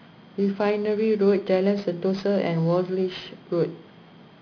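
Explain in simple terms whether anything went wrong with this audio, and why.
Aliasing runs through the whole clip: hissy sounds above 5.5 kHz fold back as gritty, false tones, which fits an unfiltered drop from 16 kHz to 11 kHz sampling.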